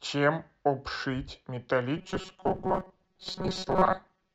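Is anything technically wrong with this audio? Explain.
Yes. From 1.97 s to the end, robotic sound from repeated short buffers: most of the audio is likely replaced by looped 5.3 ms fragments, imposing a rigid 188 Hz metallic buzz, visible as evenly spaced spectrogram harmonics and identical repeating waveform cycles.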